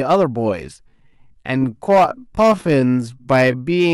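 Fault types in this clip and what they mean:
Hard clipping: the speech hits a stage with about 7 dB more level than it can pass, so the highest peaks are sliced flat. Only a small share of samples is cut, but those flattened crests add upper harmonics, heard as crackle on louder syllables.
Time-stretched section: from 0.8 s to the end the speech runs at 0.625 times its pace, likely from software lengthening it to fit a duration while keeping pitch by repeating short pieces. The pace drops abruptly, and the slowed audio drags.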